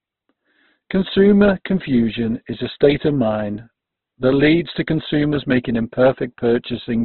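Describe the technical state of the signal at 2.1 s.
At 2.1 s the speech is band-limited, with nothing above 4.2 kHz, and this holds for the whole clip. It sounds grainy, rough and noisy. That points to heavy Opus compression, likely at a very low bitrate, filling starved bands with noise.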